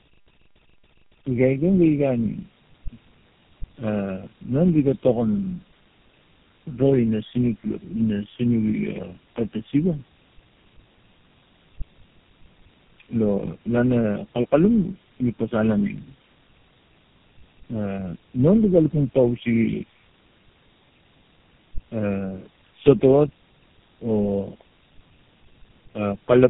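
From start to finish the speech has tandem speech coding damage: rough, muffled and warbly, with nothing above about 3.8 kHz. That fits three low-rate speech coders in a row, probably two AMR-NB stages then GSM full rate, each recoding the previous one's already degraded output.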